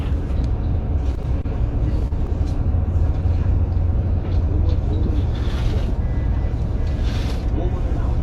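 From 1.11 to 1.46 s there is repeated packet loss with a robotic sound. Four gaps of up to 20 ms each were concealed by extending the preceding audio, about 64 ms in all and roughly a fifth of the span. The sound turns choppy and robotic, with short pieces missing.

From 2.08 to 2.13 s a single short concealed packet loss occurs. About 20 ms of audio never arrived, and the receiver bridged it with roughly 29 ms of continuation of the preceding sound before blending back, leaving a brief smear or wobble.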